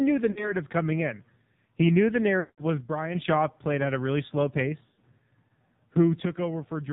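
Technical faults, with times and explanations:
Throughout: AMR narrowband mobile codec. Nothing above 4 kHz survives, and the speech has a heavy buzzy, synthetic edge from coding at 5.9 kbps, where a few pulses per subframe drive a vocal-tract model. Plain band-limiting would be muffled but clean, not buzzy like this.
0.32–0.55 s, 2.40–2.63 s, 4.86–5.05 s: lost AMR speech frames. After "knew the" at 0.32 s, a 40 ms gap before "coming in" gives a brief warbly dip. After the second "knew the", 180 ms is lost, so the sound smears and fades toward silence. After "at a really slow", 100 ms of losses scattered over 160 ms, in runs no longer than 40 ms, cause brief dips and warbles. The decoder repeats the last good pitch and vocal-tract settings with falling gain, producing smeared tones rather than clean silence.
2.80–3.15 s, 6.25–6.93 s: one channel drops out. The level falls abruptly by about 6 dB and stays steady, with no warble or smearing. 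The likely cause is one stereo channel going missing, so the mono sum carries only half of the shared signal until the channel returns at 3.15 s, and to the end of the clip after 6.25 s.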